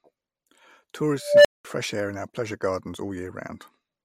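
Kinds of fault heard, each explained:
Unstable filter: a tone of roughly 500 Hz rises out of the speech at 1.21 s and swells over about 0.24 s until it is squealing and clipped, then the audio drops out for about 0.2 s before the sound returns with "fresh air in our". A recursive filter in the chain was running with bad coefficients, so its output fed back on itself and grew without bound until the values overflowed and the filter reset.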